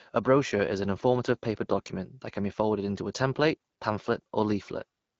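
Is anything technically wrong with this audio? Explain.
No, nothing in this recording points to a technical problem. The speech is carried by the AMR wideband (HD Voice) codec at 12.65 kbit/s, a rate at which that codec keeps speech clear, and the coding leaves only a light trace on the sound.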